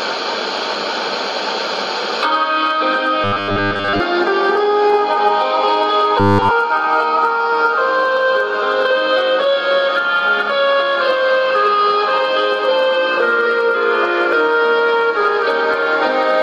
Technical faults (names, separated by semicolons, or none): robotic sound from repeated short buffers